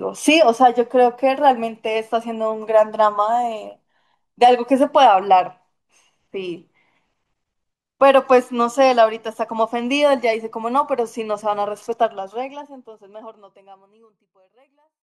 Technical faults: none

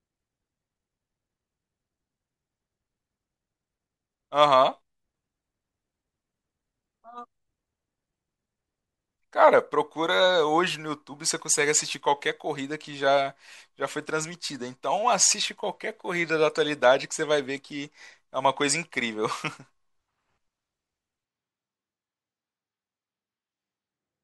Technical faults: switch to a distant microphone

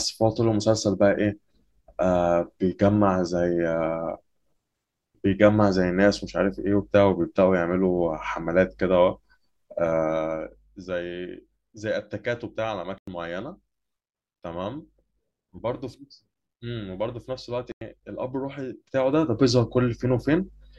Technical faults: corrupt frame muted; zipper noise

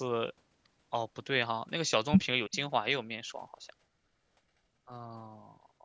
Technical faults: speech suppressed in double talk

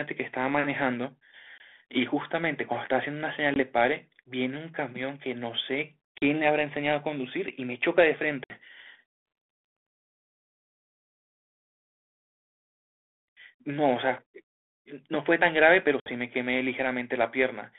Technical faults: packet loss on an ADPCM call

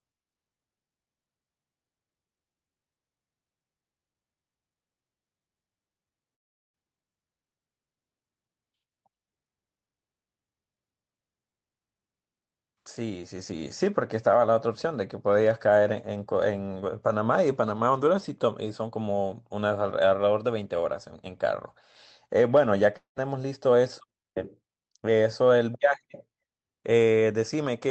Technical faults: long network dropout

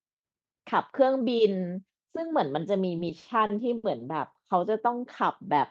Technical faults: repeated stalls (stutter)

